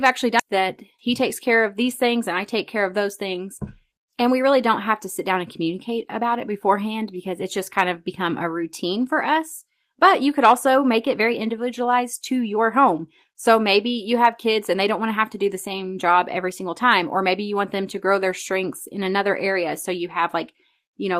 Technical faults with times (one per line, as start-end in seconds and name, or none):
0.39 skip ahead
0.53-2.76 jitter buffer speed-up